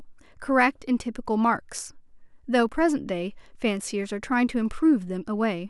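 One channel drops out from 2.69 to 2.74 s: the speech dips abruptly by about 6 dB for 50 ms, then returns. The likely cause is one stereo channel briefly going silent, so the mono sum carries only half the shared signal.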